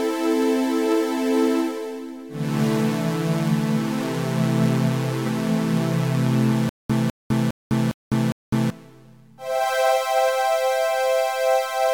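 From 6.69 s to 8.70 s the same short burst, about 202 ms long, plays five times, each followed by about 205 ms of dead digital silence, so it pulses at an even 407 ms rhythm before the audio moves on. This stutter with silent gaps likely comes from a stalled player or stream that replayed its last buffered fragment at each retry and then ran dry. The audio meant for that stretch is lost.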